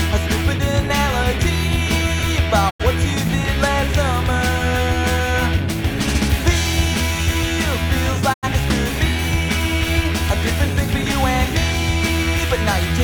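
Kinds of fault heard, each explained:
Digital broadcast dropout: the receiver mutes when incoming frames fail to decode and resumes once valid ones return. Here the audio fades out over about 20 ms, twice, at 2.69 to 2.84 s and 8.32 to 8.48 s, each gap losing roughly 85 ms, which fits two missing frames.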